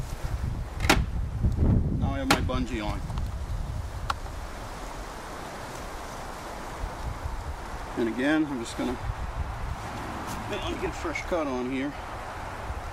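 Nothing goes wrong anywhere in this clip, so there's no fault to point to at any moment.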